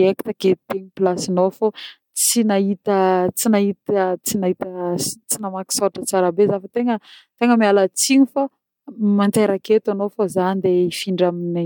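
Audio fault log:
No technical faults detected in this speech clip.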